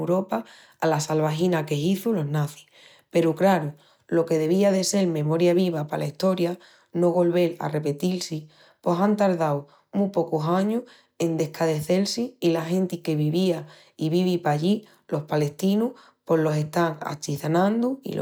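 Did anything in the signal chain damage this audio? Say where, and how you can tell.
No, nothing in the chain damaged this speech.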